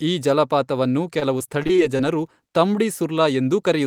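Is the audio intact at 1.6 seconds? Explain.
No. Repeated packet loss (robotic sound) runs from 1.19 to 2.01 s, covering 1.6 s. Audio packets kept going missing or arriving late across this stretch, and each hole was patched by stretching the preceding sound forward. About 133 ms was filled this way, roughly 16% of the span, with another 100 ms simply absent. The holes are short, none longer than 27 ms, but they follow one another closely, so the speech turns choppy, with pieces dropped out.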